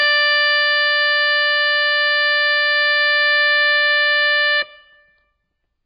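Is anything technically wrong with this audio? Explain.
Yes. Throughout the music, the sound is dull and smeared, with nothing at all above 5.2 kHz, so the top octaves of air and brightness are simply gone, and the remaining detail is heavily degraded. This is likely AAC compression: at a bitrate as low as this sounds (around 16 kbps), the AAC-LC encoder drops everything above a low cut-off and quantises the remaining spectrum so coarsely that fine texture turns to mush.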